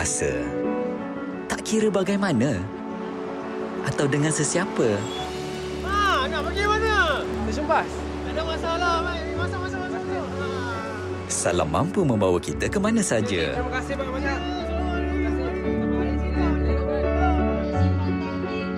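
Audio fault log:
4.99–7.44 s, filter restarted on every block: the filter loses its memory at each block boundary and restarts from silence. The repeated start-up transient gives a 23.4 Hz buzz, which fits a 2048-sample block. The waveform shows evenly spaced spikes, and the spectrogram shows regular vertical stripes.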